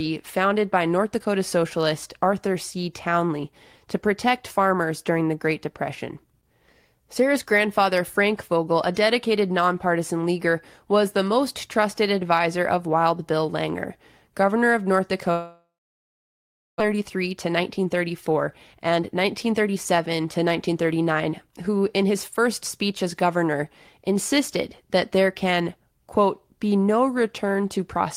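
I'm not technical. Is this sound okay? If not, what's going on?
No. There are two problems. First, a long network dropout from 15.31 to 16.82 s: the speech stops, the last sound trails off as a brief fading buzz, then about a second of silence. Most likely the connection stalled, and roughly a second of speech never arrived.

Then, a jitter buffer speed-up from 16.94 to 22.46 s: once the audio returns, the receiver has a backlog of delayed sound, so it trims tiny slices to catch up. Speech runs about 8% faster at normal pitch, sounding slightly rushed, shedding nearly half a second.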